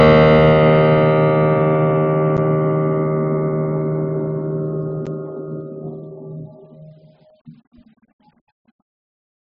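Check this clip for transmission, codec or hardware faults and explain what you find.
Three blocks of digital silence interrupt the music, at 2.37 s, 5.06 s and 7.30 s. The output buffer likely wasn't filled in time, so the sound dropped out for about 10.7 ms twice, which fits a 512-sample buffer, and 4.4 ms once. Each gap is heard as an abrupt tick.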